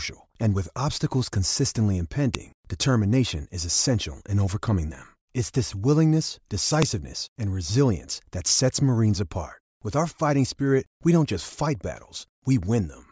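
At 2.35 s and again at 6.82 s, a sharp, loud snap cuts into the speech. This is a file header played as audio. Separate WAV pieces were joined with their headers left in. Those header bytes play back as a brief spike of samples.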